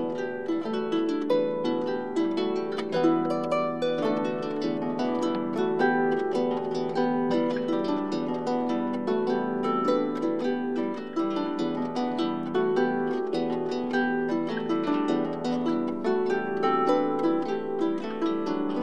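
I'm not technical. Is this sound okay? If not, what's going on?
Yes, it's fine: nothing in it jumps out as broken or glitchy, so there's nothing you need to worry about here.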